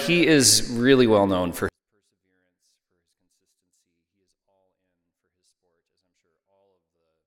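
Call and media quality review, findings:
24-bit alignment error (too quiet), 1.69 s to end. Sample-format stage reads 24-bit samples stored in the low bytes of 32-bit words as full 32-bit integers. Sudden drop of about 48 dB; sound stays clean but nearly inaudible.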